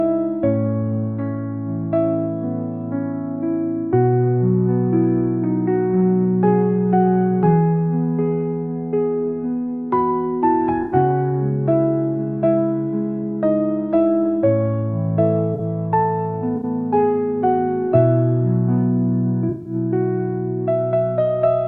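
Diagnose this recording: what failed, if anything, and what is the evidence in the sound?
Codec stage: corrupt frame concealed at 10.83–10.93, 15.54–15.60, 16.56–16.64 and 19.49–19.74 s. Damaged AAC frames were detected and muted or smeared, leaving soft-edged gaps with timing intact.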